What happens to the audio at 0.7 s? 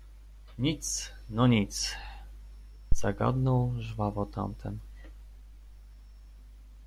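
Nothing goes wrong at 0.7 s: the speech carries on intact there, with no dropout, click, distortion or other fault.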